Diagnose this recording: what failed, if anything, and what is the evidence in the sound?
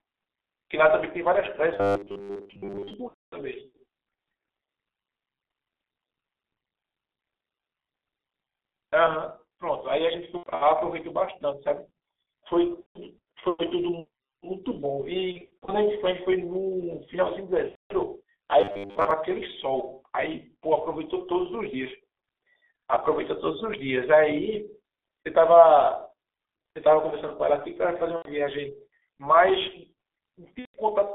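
Throughout, the speech is muffled and hoarse, confined to roughly 300 Hz to 3.6 kHz, with smeared consonants: heavy G.723.1 codec damage at the codec stage. Its coarse 30 ms frames and slow voice-model updates fit the 6.3 kbit/s mode.

From 1.74 to 2.94 s and 18.61 to 19.11 s, the speech becomes a rigid metallic 100 Hz buzz. This is robotic sound from repeated short buffers, likely a driver or buffer underrun replaying a 10 ms chunk while most of the real audio is skipped.

At 3.08 to 3.35 s, 10.37 to 10.68 s, 12.80 to 12.99 s, 15.32 to 15.74 s, 17.69 to 17.93 s, 28.16 to 28.30 s and 30.59 to 30.77 s, the speech smears into fading buzzy tones. This is VoIP packet loss concealed by the speech codec: the network dropped packets and the decoder extrapolated from its last pitch and filter. The 10.37 s and 15.32 s gaps sound broken up rather than continuous, pointing to scattered losses.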